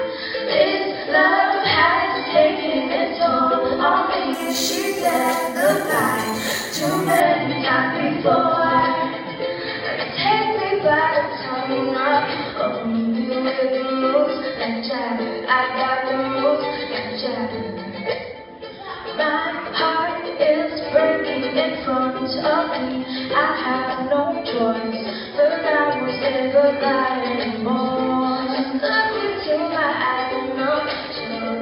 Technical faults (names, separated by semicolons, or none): imaging from sample-and-hold upsampling